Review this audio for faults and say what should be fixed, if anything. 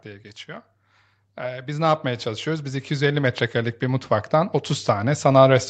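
Automatic gain rising runs from 1.47 s to 5.3 s. The level climbs by about 12 dB over nearly four seconds, and speech and background lift together. That pattern means the gain stage, not the talker, is getting louder. The automatic gain control judged the input too quiet and kept raising its gain slowly rather than settling. The missing content above 8 kHz comes from the call path's bandwidth limit. To prevent this, set a proper input level at the source, or cap the AGC's maximum gain and slew rate so it cannot drift upward during speech.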